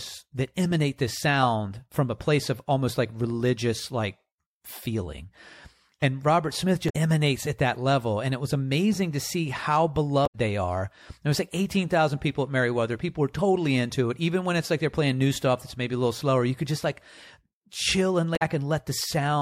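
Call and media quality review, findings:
Damaged data in a compressed stream: short chirps, squawks, clicks or holes in the speech at 6.86–6.95 s, 10.23–10.35 s and 18.33–18.42 s. The decoder misreads corrupt frames and loses sync.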